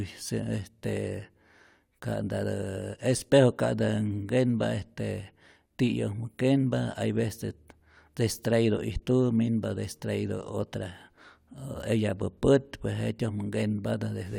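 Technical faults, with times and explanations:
Nothing in this speech recording stands out as a technical fault worth flagging.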